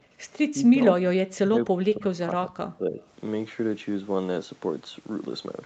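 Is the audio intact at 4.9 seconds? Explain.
Yes, the speech at 4.9 seconds is intact, with nothing there beyond the ordinary call microphone processing and the WebRTC call path, whose codec limits the sound to about 8 kHz.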